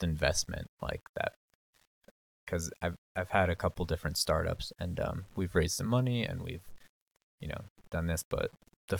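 The speech throughout this clip has most likely been rounded down to a very coarse word length without dither, with a grain that fits about 8 bits. Because the rounding error tracks the waveform instead of sitting as a steady hiss, it shows up as grainy distortion riding on the voice at roughly 30 dB below the signal, turning quiet syllables and decays gritty and making the faintest passages sputter between adjacent steps or drop to silence.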